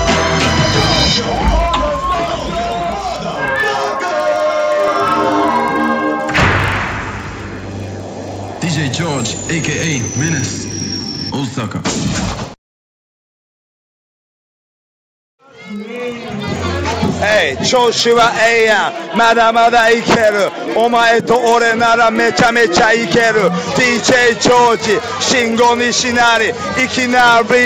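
The resampler restarted on every block, converting each 40 ms chunk in isolation, consistent with a 16 kHz to 48 kHz upsampling stage, so every block edge gets a small error. Across the whole clip this produces a steady 25 Hz ticking buzz heard only while the sound is present.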